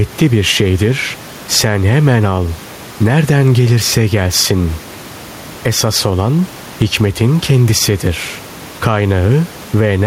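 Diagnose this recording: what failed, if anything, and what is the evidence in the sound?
Gain pumping throughout: room noise swells in pauses and ducks around 10 dB under loud speech, likely excess input gain driving a fast limiter. A noise gate would silence the gaps instead.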